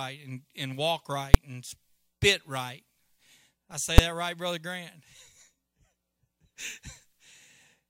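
Invalid numbers at full scale strike at 1.34 s and 3.98 s: a calculation went infinite or invalid, pinning each 5.8 ms block at maximum, heard as one sharp bang.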